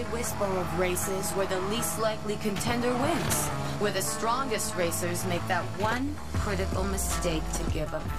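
Nothing technically wrong turns up anywhere in this audio, so there's no fault here to point to.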